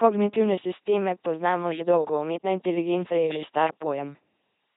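LPC-10 vocoder damage runs throughout the speech. At 2.4 kbit/s, a ten-pole vocal tract filter is excited by either a pulse train or noise, never a blend. The result is a heavy buzzing, robotic voice, with nothing above 3.9 kHz and stray buzz or hiss where voicing is misjudged.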